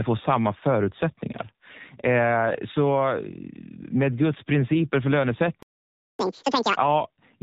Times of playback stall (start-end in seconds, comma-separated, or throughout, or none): 5.63-6.19